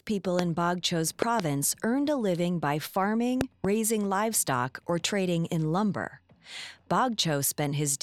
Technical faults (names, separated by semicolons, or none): loud pop